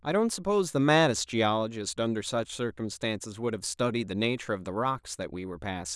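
No technical faults can be heard anywhere in this speech recording. Nothing in the signal chain draws attention to itself at any moment.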